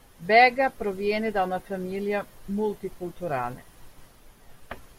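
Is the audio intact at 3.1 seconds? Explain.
Yes, the audio is intact at 3.1 seconds, with no audible fault at that moment.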